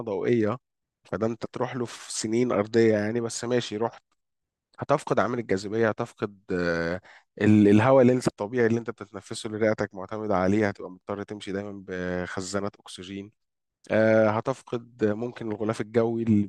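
No technical faults are audible at any point in the recording.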